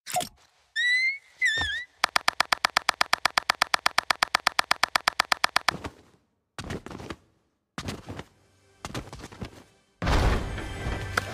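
The audio has a broken-record loop from 2.09 s to 5.71 s. A fragment about 0.12 s long repeats exactly, back to back, roughly 30 times. It gives a rapid, mechanical stutter at a steady rate. Whatever should have played in those three and a half seconds is gone. The likely cause is a stalled player, encoder or stream that kept resending the last fragment it held until fresh data arrived.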